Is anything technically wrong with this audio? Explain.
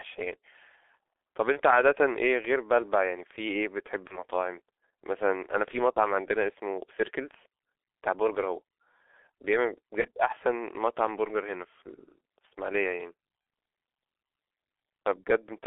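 Yes. The whole clip is speech through the G.723.1 codec at 6.3 kbit/s, heavily damaged. The line passes roughly 300 Hz to 3.5 kHz. The codec models the voice coarsely in 30 ms frames. Speech sounds muffled and hoarse, and consonants smear.

VoIP packet loss concealed by the speech codec occurs four times: 1.52 to 1.60 s, 4.07 to 4.24 s, 5.93 to 5.99 s, and 10.01 to 10.07 s. Each time a 30 ms frame goes missing. The decoder fills the gap from its last pitch and filter. The sound is stretched into a buzzy tone or coloured noise, fades, then recovers slowly.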